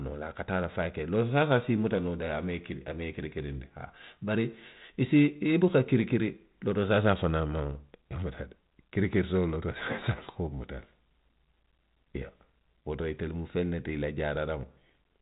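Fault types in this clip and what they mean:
No faults detected; the speech runs over a 32 kbit/s G.726 ADPCM link, band-limited below 4 kHz, with only the light coding roughness that rate brings.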